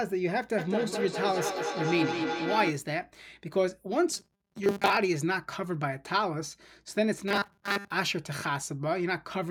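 It's a speech clip with two separate problems. From 0.58 to 2.86 s there's feedback echo between two devices: a second device in the room plays back what the first one's mic sent, that mic hears it again, and neither echo canceller catches the other's playback. Each bit of speech comes back at roughly a fifth of a second, getting thinner and ringier, with the loudest return only about 4 dB below the speech itself. Then from 4.12 to 4.97 s and again from 7.28 to 7.91 s the voice turns into a rigid, metallic buzz locked at 200 Hz that still roughly tracks the speech. That's most likely robotic sound from repeated short buffers: audio arriving too seldom and the gaps filled by looping the last few milliseconds, and a 200 Hz buzz fits a 5 ms chunk being repeated. It's heavier in the second stretch, where most of the audio is repeated rather than real, against about half in the first.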